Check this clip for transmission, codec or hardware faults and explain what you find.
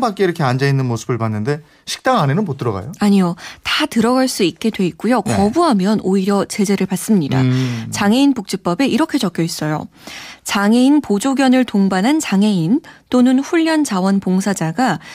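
Nothing turns up here: listening through the speech, there's no transmission, codec or hardware fault to point to.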